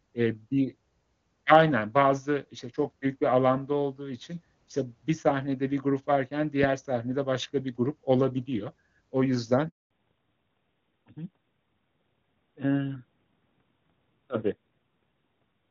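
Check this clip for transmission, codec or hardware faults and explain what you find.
Two faults are audible in this speech clip, starting at about 9.7 s and 9.9 s.

Handover gap, 9.69 to 9.91 s: as the call was passed from one network to another, no speech frames reached the receiver for 220 ms. The speech fades out within a few tens of milliseconds and gives way to dead silence until the new link begins delivering audio. Whatever was said inside that window is simply missing, not muffled or delayed.

Fallback to narrowband, 9.91 s to the end: once the new link is up, the call no longer runs as HD Voice but on an older narrowband codec, with a sound that fits AMR-NB at around 12.2 kbit/s. Before the switch, the wideband path carries crisp upper detail consistent with AMR-WB at 23.85 kbit/s. After it, nothing above 4 kHz survives, so sibilants and consonant edges lose their brightness and the speech turns duller and rougher.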